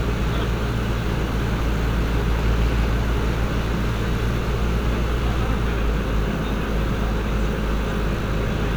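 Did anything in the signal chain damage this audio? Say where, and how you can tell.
No, nothing along the chain seems to have touched these sounds, so there's nothing to point at here.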